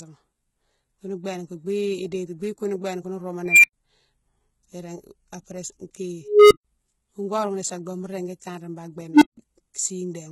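Across the whole clip the speech carries heavy codec damage: s sounds and upper harmonics turn gritty and metallic. This is likely HE-AAC compression at a low bitrate around 16 kbps, with treble rebuilt by band replication. A spectrogram shows copied, blocky upper bands reaching about 21.2 kHz.

An unstable filter, a recursive filter whose output grew without limit, produces three events. At 3.46 s a tone near 2 kHz swells over 0.18 s, then cuts to silence for 96 ms. At 6.21 s a tone near 400 Hz builds over 0.30 s before 139 ms of silence. At 9.12 s a tone near 300 Hz builds over 0.09 s before 160 ms of silence. Each is a growing beep. The waveform shows a widening envelope ending in a flat gap, and the spectrogram shows a bright horizontal line that stops abruptly.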